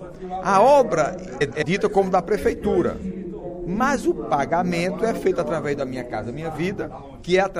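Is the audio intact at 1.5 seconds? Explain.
No. From 1.41 to 1.63 s, two adjacent blocks of frames, each about 104.5 ms (which fits four MP3 frames apiece), were decoded in swapped order. That stretch plays with its halves exchanged, heard as a garbled flutter. Underneath, the sound is watery and swirly, likely from MP3 compression at a bitrate around 64 kbps.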